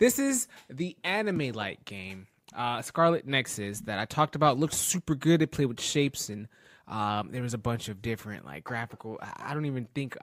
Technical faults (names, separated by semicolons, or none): resampler restarted on every block